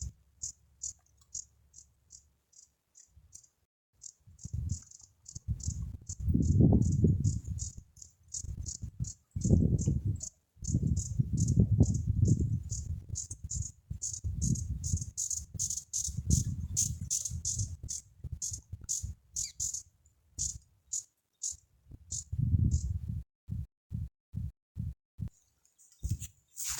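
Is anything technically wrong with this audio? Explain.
Yes, there are two playback faults.

A rebuffering stall runs from 3.65 to 3.93 s. The player exhausted its downloaded audio and halted until more data arrived. The sound drops to silence for about 280 ms, then resumes exactly where it stopped, so nothing is missing but time is added.

A stutter with silent gaps occurs between 23.23 and 25.28 s. The likely cause is a stalled stream replaying its last fragment at each retry before running empty. A 173 ms burst repeats five times, separated by 253 ms of digital silence, giving an even 426 ms cycle. The audio meant for that stretch is lost.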